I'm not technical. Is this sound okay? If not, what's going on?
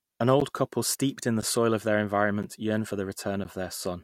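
No. This is a gap between chunks: the speech arrived in one-second pieces, leaving tiny silent holes at 0.40, 1.41, 2.43 and 3.44 s.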